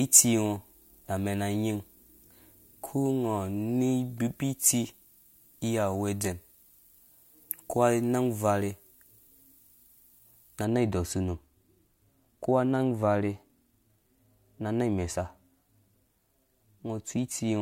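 Speech, with pre-emphasis left on from the start to about 10.65 s: a 75 µs FM-style treble lift was never undone, so 10 kHz sits about 13 dB hot, sounding thin and hissy.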